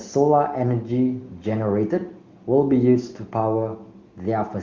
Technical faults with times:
none

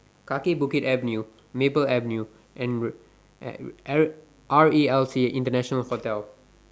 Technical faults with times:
0.00-6.71 mains buzz

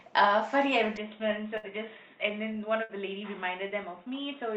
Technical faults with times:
0.97-4.56 input switched to a poorer device
1.57-1.66 burst of packet loss
2.83-2.92 burst of packet loss

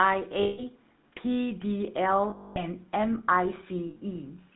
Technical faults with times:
0.00-4.56 GSM full-rate codec
0.42-0.61 lost GSM frames
2.30-2.63 lost GSM frames
3.90-3.97 lost GSM frames

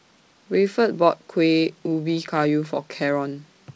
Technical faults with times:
0.00-3.75 clock drift between sender and receiver
0.11-3.74 repeated timing corrections

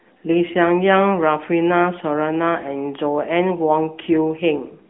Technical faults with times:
0.00-4.89 AMR narrowband mobile codec

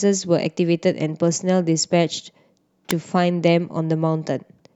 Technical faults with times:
2.91 electrical switching spike

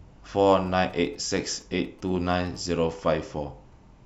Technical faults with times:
0.66-2.57 GSM signalling bursts

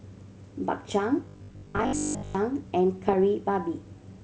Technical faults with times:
1.25-2.35 robotic sound from repeated short buffers
3.08-3.15 bit errors on an ADPCM link

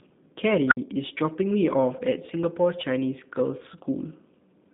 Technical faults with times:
0.00-4.73 G.729 codec
0.68-0.77 unstable filter

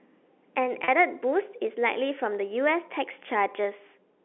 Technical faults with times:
0.84-0.88 packet loss with pitch repetition

